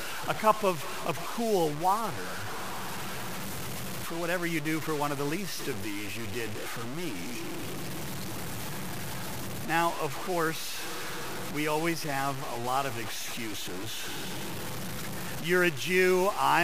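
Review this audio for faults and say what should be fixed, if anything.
The speech was likely reduced to very few bits and truncated without dither, throughout the clip, which fits about a 5-bit signal. Because no noise was added before cutting off the low bits, the error tracks the waveform itself. The rounding error sits only around 10 dB below the speech, so the whole recording carries grainy distortion. Quiet passages turn gritty, and detail smaller than one step vanishes or sputters between two levels. To prevent this, keep a full bit depth through processing, and when reducing it, apply dither before quantising.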